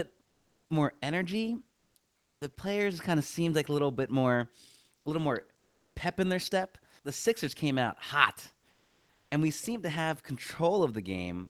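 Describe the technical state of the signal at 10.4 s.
At 10.4 s the speech signal is intact, with no technical fault audible at that moment.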